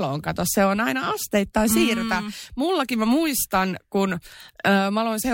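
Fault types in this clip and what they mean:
No technical faults detected in this speech recording.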